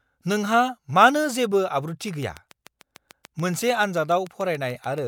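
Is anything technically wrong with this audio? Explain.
Yes. From 2.08 s to 4.99 s the speech is overlaid by a steady ticking, a train of clicks arriving at a regular 6.9 per second, about twenty in all, each with much the same sharp shape and standing roughly 5 dB above the speech, so they poke through both the talking and the gaps. Such an evenly paced run of identical pulses likely comes from interference from nearby equipment or a faulty connection or power supply injecting a spike on every cycle.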